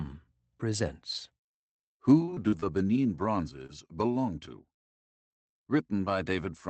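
Scattered short gaps from 2.05 to 3.84 s: about five lost packets, longest around 40 ms, were patched by extending the preceding sound, leaving brief ticks and smears.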